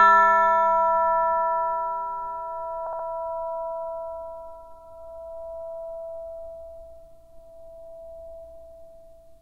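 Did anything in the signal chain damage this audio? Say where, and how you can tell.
Yes. Repeated frames in the codec or storage stage damaged the audio between 2.86 and 3.06 s. A 64 ms block of sound plays four times in a row, once as intended and then three extra times, which is heard as a stutter and makes the audio 192 ms longer. The block length fits a pair of compressed frames being written or sent again. On a waveform, the same 64 ms shape repeats back to back, and a spectrogram shows an identical pattern stamped out in sequence.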